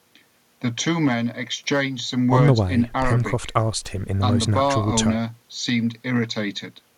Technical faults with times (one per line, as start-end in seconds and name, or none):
none